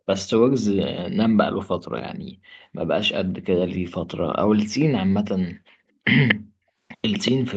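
At 6.28 to 6.35 s, and again from 7.12 to 7.32 s, a delayed copy of the speech returns 235 ms late, roughly as loud as the speech at first, then clearly quieter. This echo leak is likely a far-end speakerphone whose echo canceller let its own pickup through.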